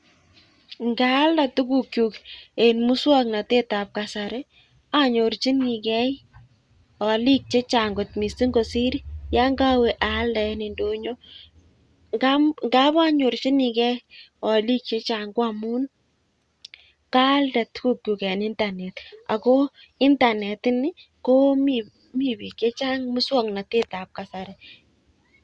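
Nothing stood out as a technical problem on listening to this speech recording.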